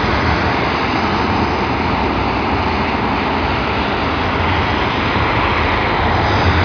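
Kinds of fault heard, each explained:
Nothing's wrong here to my ears; the sound just runs along with no glitches or breakups to point out.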